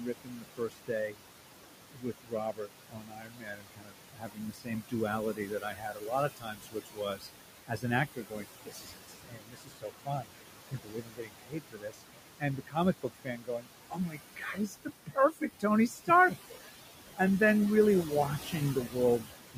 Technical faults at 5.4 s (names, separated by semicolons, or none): noise suppressor artifacts; speech cut by the noise suppressor